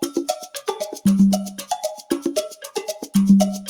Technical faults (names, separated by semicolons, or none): noise suppressor applied to music or sounds